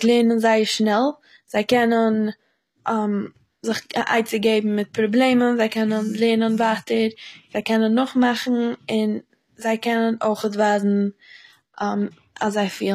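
From start to finish, the speech carries HE-AAC compression damage, and it is plainly audible. The top of the spectrum stops near 14.9 kHz. The treble above the crossover sounds synthetic, likely rebuilt by spectral band replication from copied lower bands rather than coded directly. Harmonics up there fail to line up with those below. Sibilants turn gritty and metallic, with a lispy edge. The damage points to a low bitrate, around 24 kbps.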